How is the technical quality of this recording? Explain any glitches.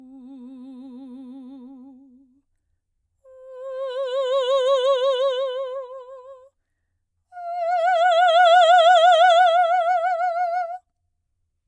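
The technical quality of this music recording is sound, and there are no glitches to explain.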